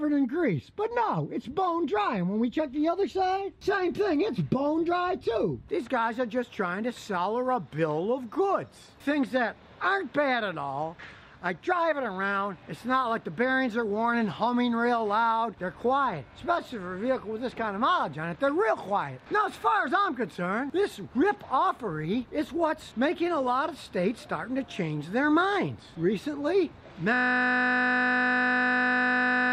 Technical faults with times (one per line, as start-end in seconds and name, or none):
27.14-29.52 system hang loop